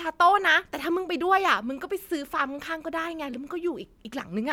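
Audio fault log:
No faults heard in playback.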